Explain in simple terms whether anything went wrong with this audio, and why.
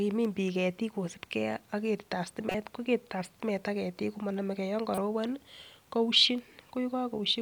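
Two short glitches break into the speech, at 2.49 to 2.55 s and 4.92 to 4.98 s. Each is a corrupt frame decoded: damaged compressed data played anyway, producing a brief chirp, squeak, blip or burst of noise.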